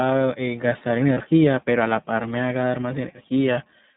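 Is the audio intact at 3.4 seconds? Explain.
No, an iLBC codec, fitting its 13.33 kbps 30 ms mode, narrowband-codes the whole speech clip, cutting everything above 4 kHz and leaving a plainly rough, synthetic sound.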